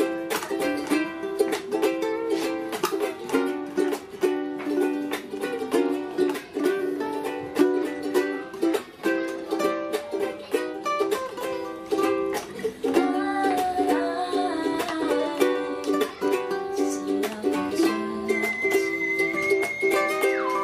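Nothing stood out as a technical fault on listening.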